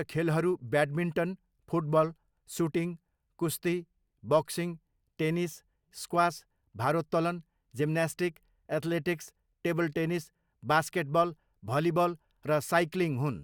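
No dropouts, clipping, glitches or other technical faults can be heard anywhere in the speech recording.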